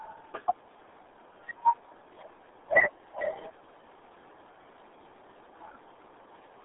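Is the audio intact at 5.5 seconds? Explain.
No. At 5.5 s, as throughout, the RealAudio 14.4 codec damage is present: the speech sits in a band of about 250 Hz to 3.6 kHz, with nothing above 3.8 kHz. The coarse, gargly muffling fits an 8 kbit/s dial-up codec. A plain telephone-band filter would leave the sound clean, without this gargly damage.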